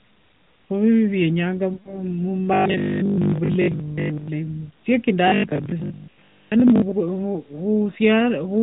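From 1.74 to 2.01 s there's a run of lost AMR speech frames: the decoder stretches the last good sound and fades it toward silence, then the audio comes back a bit rough. Between 2.54 and 4.28 s, and again from 5.28 to 6.94 s, you get robotic sound from repeated short buffers, likely from the software replaying a sliver of audio, which fits a 20 ms buffer. Most of the real audio gets skipped, leaving a rigid 50 Hz metallic buzz over the sound.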